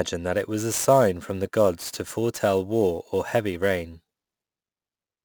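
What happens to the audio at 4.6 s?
At 4.6 s you're in the middle of sample clock jitter that runs from about 0.33 s to the end. The converter's timing wobbles by something like ten microseconds, so steep parts of the waveform get mis-sampled, leaving a hissy roughness roughly 20 dB under the speech that swells on louder, brighter sounds.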